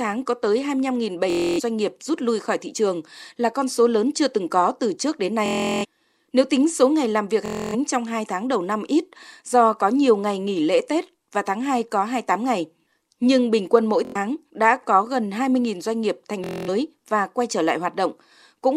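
Bluetooth stutter hits the speech at 1.30–1.60 s, 5.46–5.85 s, 7.46–7.75 s, 14.05–14.16 s and 16.44–16.69 s. Late or lost packets make one short slice repeat as a buzz. Speech then jumps ahead, skipping about 90 to 370 ms.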